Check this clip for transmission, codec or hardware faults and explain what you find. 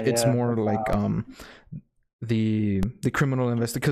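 Two DC steps are audible in the speech, at 0.93 s and 2.83 s. At each point the waveform's zero line suddenly jumps by about -14 dBFS. A converter recalibrating or an offset input being switched in would do this. The offset does not hold. It drains away as a 20 Hz high-pass in the path pulls the baseline back toward zero. Each step lands as a brief low thump, and the speech carries on unchanged.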